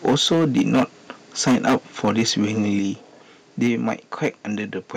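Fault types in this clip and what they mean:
Microphone overload: The peaks are flattened, with a harsh, crackling edge on the loudest syllables. This happens during five stretches: 0.05 to 0.83 s, 1.46 to 1.76 s, 2.03 to 2.58 s, 3.61 to 3.94 s, and briefly at 4.23 s. The input is likely set too high, so the converter runs out of range and cuts off the wave tops. The worst stretch is at 1.46 s, about 14 dB over, with roughly a fifth of the samples flattened. Later bursts are milder.
Microphone volume stepped down: The whole signal, voice and background together, drops in level in a single sudden step. This happens three times: at 0.09 s by about 2 dB, at 2.79 s by about 5 dB, and at 3.67 s by about 3 dB. Each drop comes during or just after a distorted stretch. The likely cause is call software hearing the overload and lowering the microphone's input volume to protect the signal.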